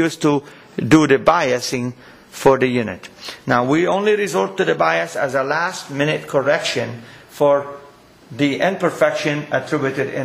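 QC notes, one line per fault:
No faults detected in this audio.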